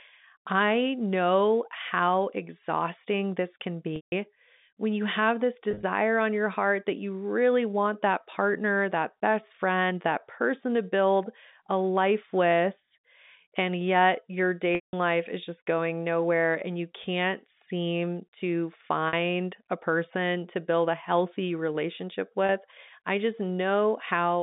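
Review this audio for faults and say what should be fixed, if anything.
Packet loss with pitch repetition occurs at 3.96–4.12 s (160 ms), 5.71–5.83 s (90 ms lost in short bursts of up to 30 ms), 14.75–14.93 s (180 ms), 19.08–19.13 s (50 ms) and 22.46–22.49 s (30 ms). The receiver fills each gap by repeating the last pitch period. The short gaps sound like a brief buzzy hold. The 160 and 180 ms gaps fade to silence after about 50 ms, and the sound then cross-fades back in. A plain dropout would go straight to silence or a click, and the held, buzzy tone marks this as concealment. The gap lengths fit 10 ms packets carried over the narrowband G.711 line. A larger jitter buffer or forward error correction on the network path would keep these packets from being lost.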